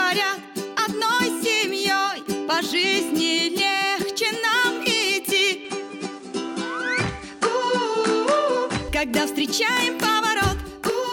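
Input switched to a poorer device, from 5.65 to 8.89 s: the audio abruptly loses everything above 10.5 kHz and picks up a fresh noise floor around 30 dB below the signal, with no gap and little level change, likely a mid-recording jump to a narrower-band microphone.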